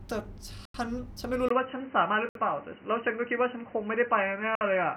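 The speech drops to silence for 90 ms at 0.65 s. This is a Bluetooth stall, likely caused by interference delaying packets until the headphones' buffer emptied. At 1.48 s a 20 ms gap is followed by a duller, boxier sound with nothing above 3 kHz, a new noise floor roughly 30 dB under the speech, and roughly the same level. This is an input switched to a poorer device, likely a narrower-band microphone or a headset call profile. Further Bluetooth stalls cut the sound for 63 ms at 2.29 s and 57 ms at 4.55 s, likely from the same buffer running dry.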